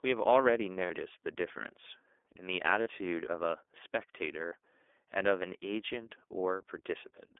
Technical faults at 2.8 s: iLBC codec; lost iLBC frames

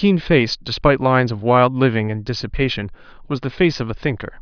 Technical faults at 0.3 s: none

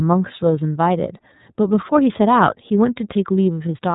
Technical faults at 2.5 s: iLBC codec

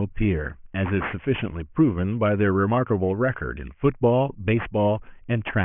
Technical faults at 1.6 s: aliasing

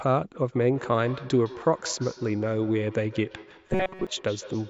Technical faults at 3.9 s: feedback echo between two devices; robotic sound from repeated short buffers

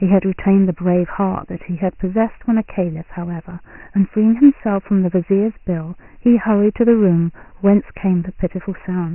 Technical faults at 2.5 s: Dialogic VOX ADPCM

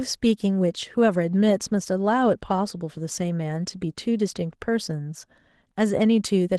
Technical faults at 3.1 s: Opus voice compression

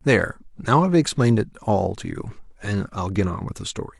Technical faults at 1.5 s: none

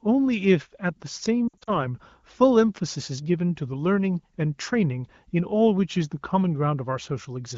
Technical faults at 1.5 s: lost AMR speech frames

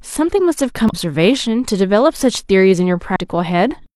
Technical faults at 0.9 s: damaged data in a compressed stream

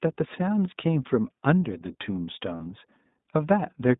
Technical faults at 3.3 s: iLBC codec

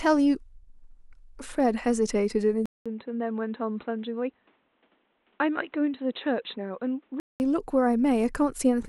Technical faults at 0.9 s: none

